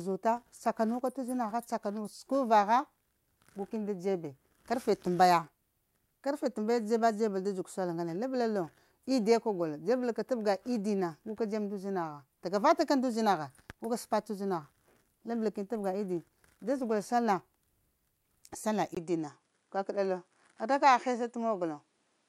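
At 18.95 s the recording likely had its input switched to a poorer device. After a 20 ms gap, the speech loses everything above 10.5 kHz and turns duller, with faint new background noise far below it, at much the same level.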